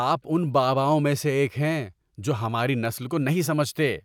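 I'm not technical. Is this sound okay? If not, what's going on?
Yes, the recording is technically sound, with no dropouts, glitches or distortion anywhere in it.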